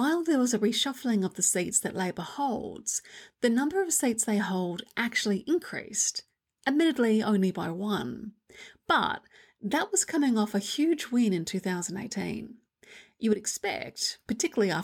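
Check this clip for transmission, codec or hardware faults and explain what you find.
One fault is present, near the end of the speech. A sudden gain jump runs from 13.33 s to 13.98 s, where the level drops by about 6 dB from one sample to the next and then returns at the end of that span. The likely cause is a gain setting or bit shift applied in the digital path without any ramp. The speech and the background noise fall together for those 0.65 s, so the whole signal becomes quieter at once.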